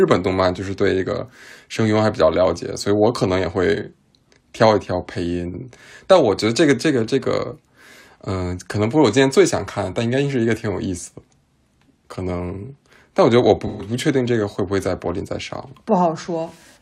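A speech clip with a brief smeared, phasey patch from 13.66 to 13.86 s. This is AAC frame loss with concealment: about 128 ms of frames went missing, and the decoder filled the gap from the last good spectrum.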